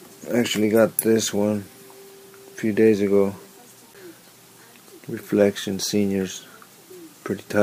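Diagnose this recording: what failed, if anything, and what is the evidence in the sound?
A CD skip at the playback stage at 3.94 s: the player mutes for about 10 ms, then resumes from another turn of the disc's spiral, jumping forward or back. The waveform shows a brief gap and a discontinuity; the spectrogram, a thin broadband stripe and a sudden content change.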